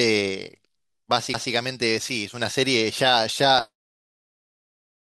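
At 1.33 s the speech is interrupted by a CD skip. A knock or a surface flaw threw the laser off its track onto another turn of the disc's spiral. The player muted briefly, for only a few milliseconds, then resumed reading from the new position. The result is a small tick followed by an abrupt jump in the speech. Part of the sound is either lost or repeated, depending on the direction of the jump.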